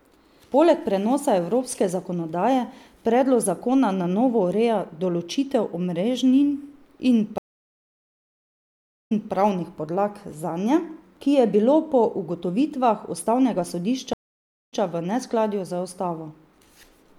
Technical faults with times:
7.38-9.33 stream reconnect
14.13-14.80 stream reconnect

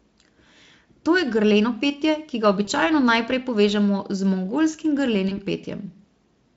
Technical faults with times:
2.65-2.70 VoIP packet loss concealed by the speech codec
5.29-5.38 VoIP packet loss concealed by the speech codec

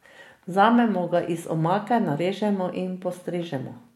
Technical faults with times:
none

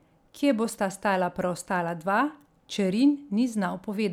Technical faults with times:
none

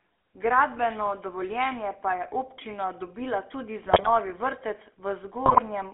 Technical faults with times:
0.00-5.94 GSM full-rate codec
3.86-4.10 GSM bit errors
5.46-5.59 GSM bit errors

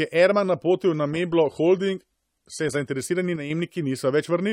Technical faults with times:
0.84-2.84 adaptive stream at a lower bitrate
3.36-3.50 one channel drops out

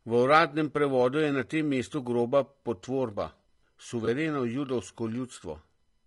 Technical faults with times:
0.00-6.06 low-delay AAC compression
4.05-4.08 AAC frame loss with concealment

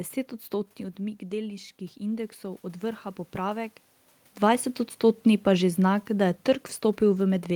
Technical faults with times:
0.50-3.83 automatic gain rising

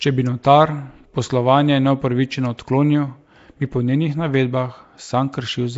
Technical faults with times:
0.00-5.77 Nellymoser compression
0.43 pre-echo

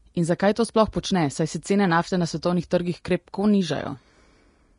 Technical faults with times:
0.00-4.79 Vorbis compression

